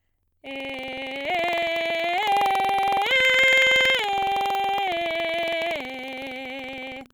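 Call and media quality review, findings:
Buffer tearing, throughout the music: steady robotic rattle at 21.5 Hz, which fits a 2048-sample buffer. A small slice of each period replays audio about a tenth of a second old, with hard joins. Playback ring-buffer pointer slip. No silent gaps, unlike underrun.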